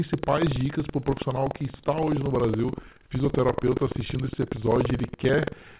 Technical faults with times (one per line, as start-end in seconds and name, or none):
0.00-5.79 buffer tearing
0.00-5.79 clock drift between sender and receiver
0.20-5.18 repeated timing corrections